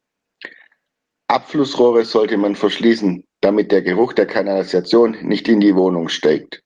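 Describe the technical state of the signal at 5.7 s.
At 5.7 s the speech is intact, carrying only the light, even coding of the Opus voice compression that runs through the whole clip.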